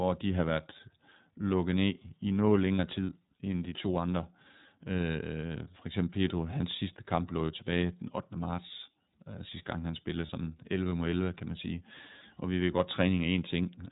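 iLBC codec coding runs through the whole of this speech recording. Nothing above 4 kHz survives, and the voice has a plainly audible rough, synthetic edge. The codec rebuilds each short frame's excitation on its own, and the character fits iLBC's 13.33 kbps mode with 30 ms frames. Lost iLBC frames interrupt the speech at 2.76 s and 10.26 s, each a dropout of about 30 ms, which points to a single missing packet. The decoder fills each hole by repeating the last pitch cycle with added noise, heard as a brief held, buzzy vowel. The speech recovers right away, because each frame decodes without relying on the one before.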